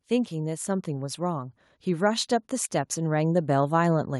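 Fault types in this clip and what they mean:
Automatic gain rising: the automatic gain control judged the input too quiet and kept lifting its gain, so from 0.05 to 2.35 s the speech and the background noise swell together, climbing by about 5 dB over those two-plus seconds.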